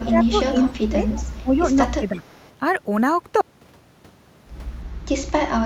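From the start to 1.07 s the speech repeatedly sinks and thins, dropping by up to about 15 dB across roughly 0.7 s of that stretch. This is speech suppressed in double talk: the echo canceller likely mistook overlapping speech from both ends for echo and turned the near talker down with it. The same dipping returns more gently, about 10 dB deep, from 1.43 to 1.81 s and again from 1.97 to 2.25 s, each time likely from the suppressor clamping during overlap.

Inside that first stretch, from 0.06 to 0.25 s, a faint delayed copy of the speech trails 331 ms behind, about 15 dB below it. This is an echo leak, likely the loudspeaker's output reaching a microphone whose canceller did not fully remove it. A weaker scrap, about 20 dB down, appears from 1.16 to 1.33 s, likely the same residual escaping. From 2.25 to 2.5 s a last trace sits about 35 dB below the speech, likely the same leak once more.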